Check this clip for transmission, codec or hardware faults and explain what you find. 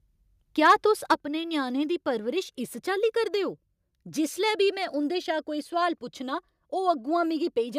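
Two kinds of fault show up: microphone overload and a stepped-down microphone volume.

Microphone overload occurs from 0.65 to 0.73 s, just before "तुस अपने", and again from 1.11 to 1.13 s. The likely cause is an input gain set too high, so peaks reach about 3 dB and then about 2 dB beyond the converter's ceiling and have their tops sheared flat. Roughly one sample in twenty is clipped in the first burst, and fewer in the second. The result is a harsh, crackly grit on those loud moments.

The microphone volume stepped down at 1.14 s, immediately after the second overload, and again at 7.26 s. This is likely the call software reacting to a loud or clipping input by cutting the device's input gain in a single jump. The first step is 6 dB and the second about 1 dB. Voice and background fall together at once: the first drop halves the level, and the second is much smaller.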